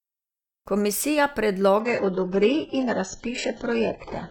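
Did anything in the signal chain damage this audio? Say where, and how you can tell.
Yes. An adaptive stream at a lower bitrate takes over at 1.80 s and stays until the end of the clip. This is a network-driven fault that shows up in the codec: the player switched to a much thinner encoding, with no gap in the speech. From 1.80 s the treble disappears above 8 kHz and codec artefacts thicken, a sudden drop that points to a move from around 96 kbit/s AAC to a very low-rate HE-AAC stream.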